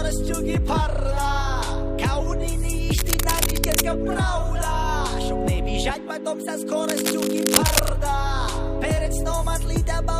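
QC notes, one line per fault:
2.95–3.8 s, cable scratch noise: a worn cable, connector or control was likely moved, so its contact resistance jumped about erratically for roughly 0.85 s. The resulting dense, irregular noise bursts sit only a little below the main signal, so a harsh scratching rustle rides audibly over the sound.
6.83–7.9 s, cable scratch noise: an unstable contact, likely disturbed, adds just over a second of rough, crackling noise at a similarly high level.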